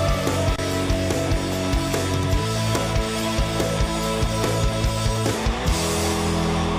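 At 0.55 to 0.93 s and again at 3.34 to 3.53 s there's loose connector crackle, a worn contact briefly making and breaking, so the sound gets chopped into scratchy pops.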